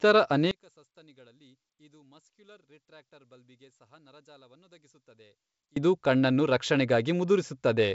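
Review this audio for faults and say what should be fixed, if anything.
One channel inverted, 0.51 to 5.76 s: speech falls about 32 dB to a faint residue, likely from opposite-polarity channels cancelling in the mono sum, returning at "ಇದು ಕಣ್ಣನ್ನು". Checking inter-channel polarity with a correlation meter before any mono downmix would catch and correct the flipped channel.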